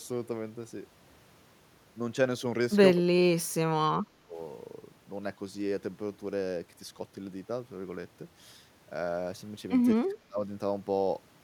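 At 2.96 to 3.12 s, 3.38 to 3.55 s, 4.03 to 4.37 s and 9.94 to 10.44 s the speech dips sharply, by anywhere from roughly 15 to 30 dB, sounding choppy and muffled in brief holes. This is likely speech suppressed in double talk, with an echo canceller mistaking the talker for loudspeaker echo while both sides spoke and gating it down. A waveform shows abrupt envelope notches, and a spectrogram shows the harmonics fading to near-blank bands.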